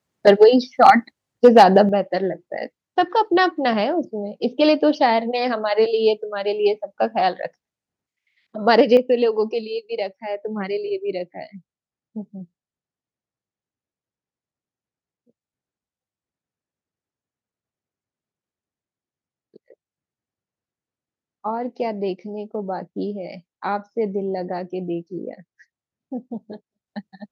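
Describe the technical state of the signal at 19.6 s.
At 19.6 s the signal is intact, with no audible technical fault at that moment.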